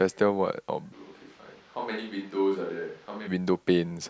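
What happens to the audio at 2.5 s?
A switch to a distant microphone runs from 0.94 to 3.26 s, likely after the close mic dropped out. The speech turns hollow, thin and roomy, about 10 dB quieter and noisier. Its abrupt edges set it apart from added reverb.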